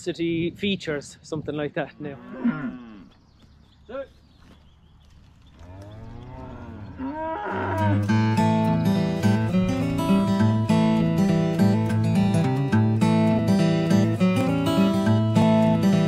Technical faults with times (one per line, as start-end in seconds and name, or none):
13.39-15.42 periodic USB or driver dropouts